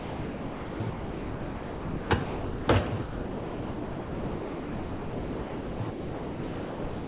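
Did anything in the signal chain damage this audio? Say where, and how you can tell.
Yes, sound dropped by the voice detector, at 0.0–0.8, 0.9–2.1, 2.24–2.68, 2.88–2.92, 3.02–5.8 and 5.9–7.08 s. The sound gives way to steady comfort noise, audible in call processing. The sender's detector likely judged the material as background and stopped sending.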